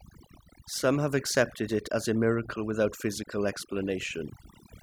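From start to finish the background is near-silent and flecked by twinkling specks. This is overdone noise removal: the reduction was set too strong, cutting frequency bands close to the noise estimate and taking quieter parts of the voice with them.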